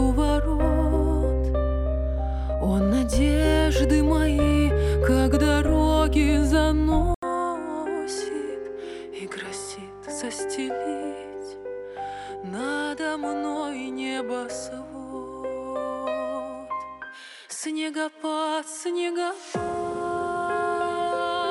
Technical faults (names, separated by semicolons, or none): input switched to a poorer device